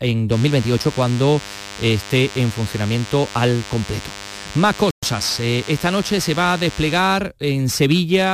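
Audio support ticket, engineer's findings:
DECT cordless phone buzz, 0.32 to 6.98 s. Thin, steady 100 Hz buzz with dense harmonics, well below the speech. A nearby DECT handset or base pulsing every 10 ms, rectified in the audio circuitry. Buzzy and harmonic-rich, not smooth like mains hum.

Playback stall, 4.91 to 5.03 s. Output drops to silence for 120 ms mid-flow, then resumes. Likely a player buffer underrun or a blocked output thread. A clean silent gap with no garbled fragments, unlike packet-loss concealment.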